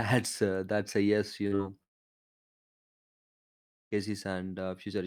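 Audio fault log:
1.47 s and 1.55 s, short concealed packet loss: two brief smears in close succession, each about 40 ms of sound that never arrived in time, so the receiver stretched the preceding sound over the gap and blended back into the real audio, leaving a wobble where detail is missing.
1.83 s to 3.94 s, long network dropout: the speech breaks off and roughly two seconds of near silence follow before it resumes further on, with that stretch simply gone. This is likely a network outage where nothing arrived and the receiver's fill quickly faded away.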